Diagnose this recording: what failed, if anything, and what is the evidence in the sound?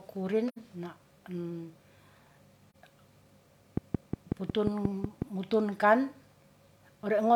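AAC frame loss with muting at 0.48 to 0.57 s and again at 2.70 to 2.76 s. At the codec or network stage, whole frames went missing and the decoder zeroed them. This left soft-edged holes of about 85 ms (two frames) and 43 ms (one frame) that fade out and back in.

Train of clicks from 3.77 to 5.23 s. Around ten sharp, similar pulses tick over the speech at a regular 5.5 per second, peaking about 15 dB above the signal. The cause is likely electrical interference coupling into the analogue wiring.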